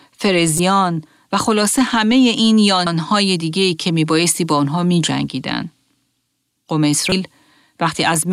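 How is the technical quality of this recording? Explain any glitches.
Damaged data in a compressed stream causes three short glitches in the speech, at 0.56 to 0.60 s, at 2.86 s, and at 7.09 to 7.12 s. Corrupted bytes make the decoder misread frames and resync, producing brief chirps or blips. A spectrogram shows thin broadband vertical streaks there, and the waveform shows abrupt discontinuities.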